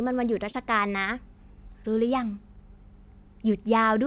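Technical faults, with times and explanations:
0.50–0.55 s, short concealed packet loss: roughly 40 ms of the call's audio arrived too late for the decoder, so the receiver stretched the preceding sound to cover the gap, extending its pitch where the speech was voiced or using shaped noise where it was not, before crossfading back to the real signal. The result is a brief smear or wobble in the speech, heard over the narrowband sound of the call path, which stops at 4 kHz.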